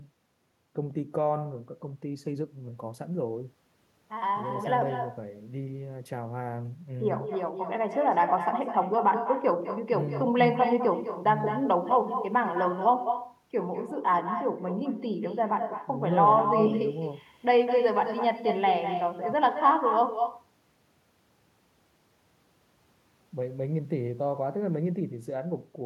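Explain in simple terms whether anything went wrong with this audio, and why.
Echo with no canceller runs through the whole clip: about a fifth of a second after each bit of speech, a quieter, thinner copy follows. The far end's loudspeaker fed its microphone, and nothing stripped that copy out before it returned.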